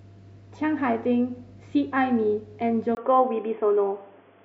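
At 2.95 s a brief dropout of about 20 ms gives way to speech that sounds narrow and boxy to the end, with nothing above 3.4 kHz, a faint new noise far below the speech, and no real change in loudness. The likely cause is an input switched to a poorer device.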